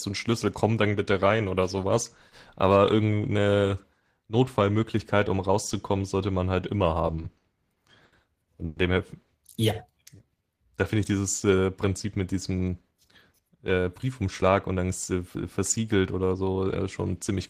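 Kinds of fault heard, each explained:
Repeated stalls (stutter): Between 7.07 and 8.14 s the speech halts seven times, each gap filled by stretching the last sound, the longest about 80 ms and 190 ms in total. Nothing is lost, unlike dropouts, but the phrase drags and hiccups repeatedly rather than pausing once.
Call audio freeze: At 8.66 to 8.78 s the speech stops once and the final sound is held as a brief fading continuation for 100 ms, then resumes where it left off. It is a single hold, not a run of stalls, likely caused by packets arriving late enough to empty the jitter buffer.
Jitter buffer slow-down: From 9.91 to 10.58 s the speech plays at about 85% speed, with 114 ms added by repeating tiny pitch-length pieces. The pitch stays put while sounds are drawn out, which separates it from a tape-style slowdown that would lower the pitch.
Jitter buffer speed-up: From 12.61 to 14.80 s the speech runs at about 108% speed as the receiver trims short pitch-period pieces, roughly 200 ms in all. 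It sounds hurried at unchanged pitch, the reverse of the slow-down, with no gaps or held sounds.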